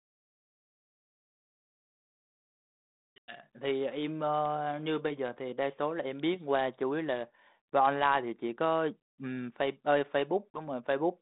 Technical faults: packet loss on an ADPCM call

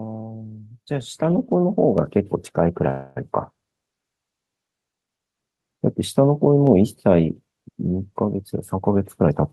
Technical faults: call audio freeze; jitter buffer speed-up

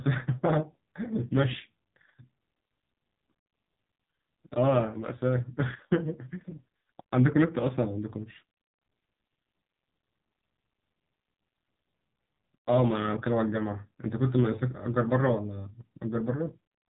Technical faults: AMR narrowband mobile codec

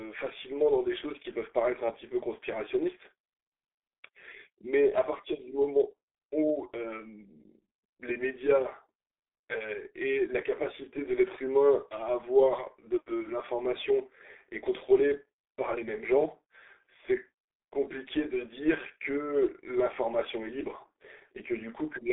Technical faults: G.723.1 codec

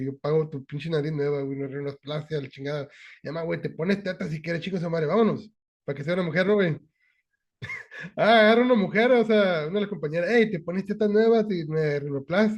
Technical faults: none

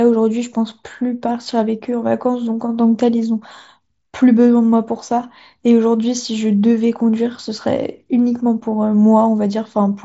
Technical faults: none

